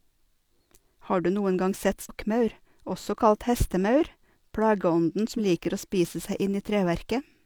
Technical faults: damaged data in a compressed stream

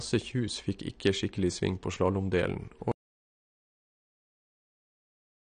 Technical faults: AAC compression; audio dropout to silence

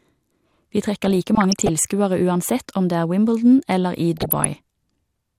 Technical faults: DAB burbling

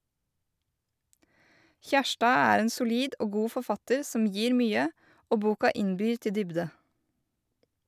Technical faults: none

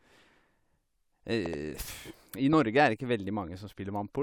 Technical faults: loud pop

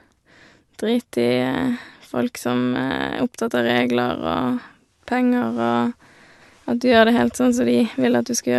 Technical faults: none

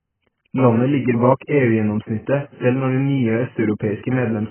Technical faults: AAC compression

